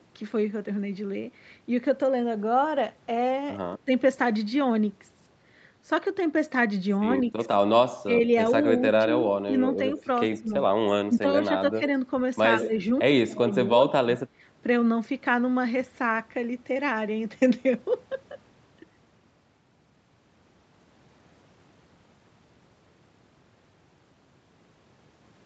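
An echo canceller that likely could not tell this talker from loudspeaker echo while both sides spoke turned the outgoing signal down. That produces speech suppressed in double talk. The first dip comes at 3.85 to 3.91 s and is short and shallow, about 10 dB. A longer stretch from 8.96 to 10.51 s drops by about 20 dB in places. Further dips follow at 11.08 to 11.82 s (about 15 dB), 12.61 to 12.78 s (about 10 dB) and 13.24 to 13.81 s, the deepest at about 25 dB. In each, the voice sinks or breaks up in pieces before recovering.

Two brief scraps of echo leak sit among these. They are likely residue the far end's canceller failed to remove from its microphone and sent back. Each is a copy of the voice trailing by 96 ms. At 7.26 to 7.30 s it is very faint, far below the speech. At 10.32 to 10.36 s it is clearly louder, though still well under the voice, and lands inside the suppressed stretch. 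Both scraps share the call path's band limit, with nothing above 8 kHz.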